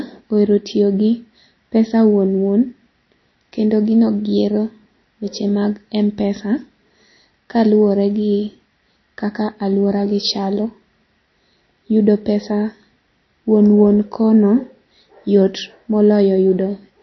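From start to end the speech carries plainly audible damage, likely from MP3 compression at a low bitrate, around 32 kbps. Nothing sounds above 5.9 kHz. Unlike a plain low-pass filter, weak frequency lines flicker between frames, giving a watery swirl and chirpy, smeared s sounds.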